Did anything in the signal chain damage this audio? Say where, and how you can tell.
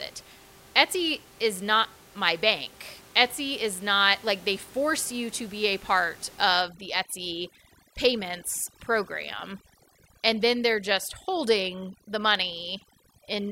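Yes. From 6.62 s to the end of the clip, the background collapses into near silence with twinkling specks. That is overdone noise removal at the call-processing stage: an over-aggressive suppressor gates out bands sitting near the room noise, which lies about 24 dB below the speech, and takes quiet speech components with them.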